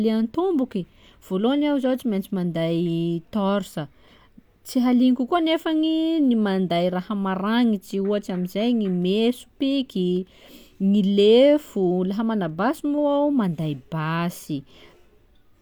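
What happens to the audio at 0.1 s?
At 0.1 s the speech plays through intact, with no dropout, click or distortion.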